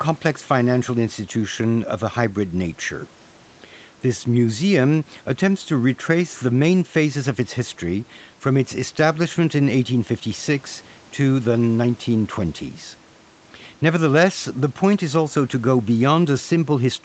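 There are no technical faults to describe in time order in this speech clip.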